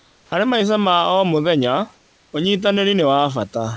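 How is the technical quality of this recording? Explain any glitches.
The recording has two kinds of glitch, both around pauses in the speech. It comes over a call path with nothing above 8 kHz, which fits a wideband codec such as G.722, and the room background sits about 36 dB below the speech.

Comfort noise in place of the background, 0 to 0.32 s and 1.94 to 2.33 s: the natural room sound gives way to a flat, featureless hiss, about 4 dB and then about 3 dB quieter. Likely the sender stopped transmitting during silence, and the receiver filled the gap with synthetic noise roughly matching the background.

Onset clipped by the voice detector, 0.29 to 0.32 s: the speech begins abruptly, its first 30 ms missing and covered by that same synthetic hiss. The detector was likely slow to register that sound had resumed, so the soft opening was never sent.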